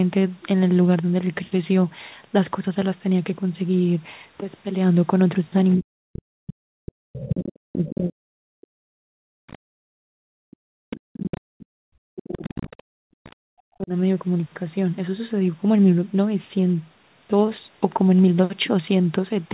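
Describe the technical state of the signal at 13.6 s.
At 13.6 s the speech is choked in patches, dropping by up to about 40 dB between 5.75 and 13.92 s. This is likely speech suppressed in double talk, where the echo canceller treated the talker as echo and turned it down. On the waveform the envelope collapses into gapped stretches, and the spectrogram shows near-empty holes.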